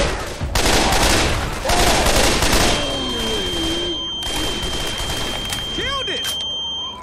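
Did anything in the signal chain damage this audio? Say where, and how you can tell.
Yes. From 2.54 s to the end, a thin, steady feedback whistle sits at 3.2 kHz. It stays a few decibels below the main sound and swells and fades slowly in level, but it never grows. That steady, single pitch points to the analogue stage, with the likely cause a loudspeaker-to-microphone loop held right at its feedback threshold. One frequency keeps recirculating around that loop without running away, so it rings on behind the audio.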